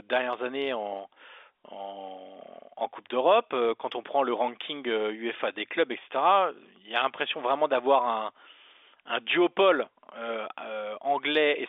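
Nothing in this speech stands out as a fault, just the ordinary narrow sound of G.711 telephone coding, with the band running from about 300 Hz up to 3.6 kHz.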